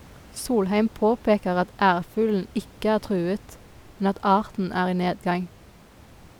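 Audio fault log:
No faults are audible anywhere in this speech recording.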